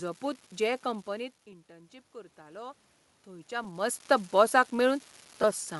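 From start to finish, one data line in the digital path is marginal, so an unreliable data bit flips in a random share of samples. Each flip throws an equal-sized spike into the waveform, heard as a steady fine crackle that carries on through the pauses between phrases.

Also throughout, the speech has a breathy, grainy edge, likely from Bluetooth LC3 compression. The codec discards much of the upper spectrum in each short frame and fills the gap with noise. The damage is plainly audible and fits a rate around 48 kbps.

From 1.13 to 3.83 s, automatic gain rising sets in. The input drops by about 18 dB as the talker moves back around 1 s, and the gain control responds slowly, adding about 6 dB. Voice and room noise swell together over more than two seconds.

At 1.52 s and again at 3.64 s, a single lost LE Audio frame of 7.5 ms occurs. The decoder fills each gap by reusing the previous spectrum with scrambled signs, so the sound briefly smears into a short noisy blur instead of dropping out.

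From 5.42 to 5.44 s, two consecutive lost LE Audio frames leave a 15 ms gap. The same concealment repeats the last spectrum with random signs, so the smear lasts a little longer and comes across as a brief hiss.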